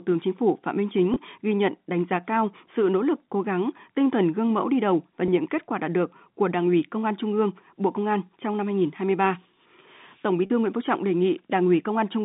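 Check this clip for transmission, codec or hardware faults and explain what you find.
There are three short dropouts, all packet loss with pitch repetition, over a G.711 telephone line whose band stops near 3.7 kHz. They occur at 1.14–1.16 s (before "ghi nhận đánh giá"), 5.26–5.28 s (between "mẫu đi đầu và" and "kết quả đạt được"), and 10.46–10.50 s. Each gap is bridged by repeating the last pitch period, so it sounds like a brief buzzy hold. On the waveform this shows as identical repeating cycles. On a spectrogram it appears as frozen harmonics. The first two gaps fit one 20 ms packet each, and the last fits two.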